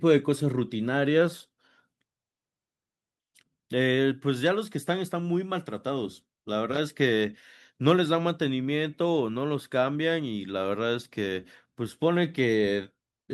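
Speech recording, with no technical fault to report. Nothing heard in it calls for a time or a cause.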